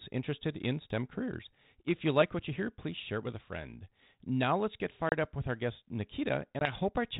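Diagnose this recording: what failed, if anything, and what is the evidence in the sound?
Network stage, packet loss on an ADPCM call: hard-edged silent holes at 5.09–5.13 s (30 ms, a few packets) and 6.59–6.73 s (20 ms), each followed by slightly distorted sound as the G.726 32 kbit/s decoder's predictor and step size resynchronise. That recovery transient distinguishes it from a plain dropout.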